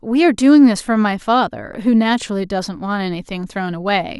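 No technical faults are audible.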